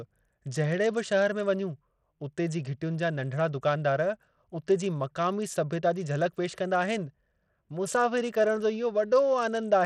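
Throughout the speech, the treble flickers and drops out under gritty noise. This is likely Bluetooth SBC compression, at a low bit pool consistent with about 80 kbps.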